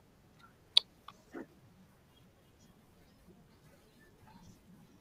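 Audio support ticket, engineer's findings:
Chunks out of order, 1.12–1.86 s: two 0.37 s speech chunks swapped, jumbled, with three hard joins. Nothing missing or repeated, unlike dropout or stutter. Probable buffer/write sequencing.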